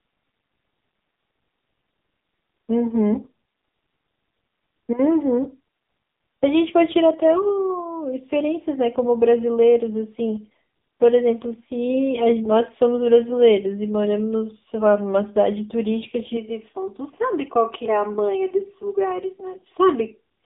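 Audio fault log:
throughout, AMR narrowband mobile codec: a low-rate mobile speech coder, consistent with about 6.7 kbps, rebuilds the speech from a coarse vocal-tract model, leaving it heavily buzzy and synthetic with nothing above 3.8 kHz.
16.37 to 20.45 s, channel delay (comb filtering): one channel runs around 3 ms late before the mono sum, cancelling evenly spaced frequencies from near 200 Hz upward, so the speech turns hollow and phasey.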